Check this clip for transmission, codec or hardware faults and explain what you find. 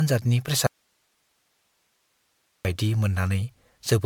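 Two faults are present in this speech clip. One runs throughout, and one is a long break near the start.

Generation loss affects the whole clip. The audio sounds swirly and hollow. Consonant attacks are smeared. That is more damage than a single MP3 pass at around 130 kbit/s would cause. The sound points to about ten rounds of decoding and re-encoding as the likely cause. Each pass quantises again on a shifted frame grid. So the noise and spectral holes pile up with every pass.

An audio dropout to a faint residue runs from 0.67 s to 2.65 s. The speech vanishes abruptly for almost two seconds. It returns just as suddenly. It does not fade like a natural pause. Only hiss fills the gap, roughly 50 dB below the speech. That points to the wanted signal being lost upstream while the path after the break stayed live. This is the likely cause. The remaining chain kept passing its own noise floor.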